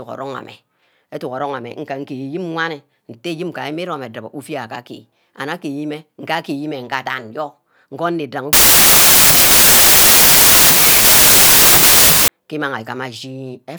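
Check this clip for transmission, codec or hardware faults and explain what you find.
One fault, a wrong sample width, runs from 8.53 to 12.28 s. Packed 24-bit samples were read as 32-bit, splicing mismatched bytes, so the speech plays 1.33 times too fast and high, buried in loud broadband noise. The waveform turns dense and loud and the spectrogram turns to dense noise.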